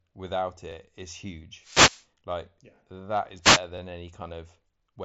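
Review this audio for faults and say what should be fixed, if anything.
The speech shows overlapping chunks at 0.72–0.74, 1.74–1.76, 2.76–2.78, 3.78–3.80 and 4.80–4.82 s. At each join of the 1.0 s blocks, 20 ms of sound plays twice, giving a regular stutter about once per second. Chunk boundaries should be aligned or crossfaded with overlap-add so no audio is duplicated.

There are wireless microphone noise hits from 1.57 to 2.08 s and from 3.42 to 3.61 s. The analogue FM link fades as reflections cancel, so receiver noise rises into a swish of static over the speech, which is band-limited near 7.7 kHz by the mSBC headset path. Diversity receivers, better antenna placement and a clear line of sight would prevent these dropouts.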